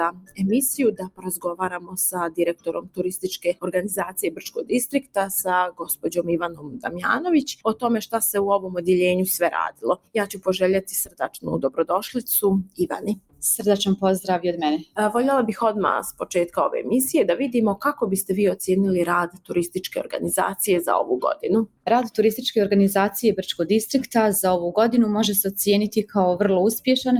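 A noise suppressor built for speech runs on this sound for the whole clip. It treats steady tones and tails as noise. Level swings by around 15 dB as it clamps and releases. Held parts pump and thin, while attacks pass.

Sound cut by the noise suppressor first appears from 0.1 to 13.42 s. Roughly half that stretch sinks, by up to about 20 dB. Shorter cuts follow at 14.78 to 14.98 s, 16.12 to 16.57 s, 19.28 to 20.14 s and 21.35 to 21.87 s. These drop by about 11 to 20 dB.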